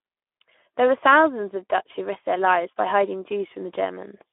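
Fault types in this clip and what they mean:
Speex codec: the speech went through the low-rate Speex CELP coder, which fits roughly 11 kbps and leaves too few bits for the excitation. It sounds plainly noisy and hoarse, held to a 250 Hz to 3.4 kHz band with nothing above 3.8 kHz.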